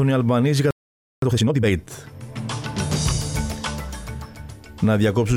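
A playback stall at 0.71 s cuts the sound to silence for about 0.52 s, likely because the player ran short of data, before resuming at 1.22 s. Time-compressed catch-up follows from 1.22 to 1.72 s, as small pieces are cut and cross-faded at twice normal speed, sounding hurried at unchanged pitch.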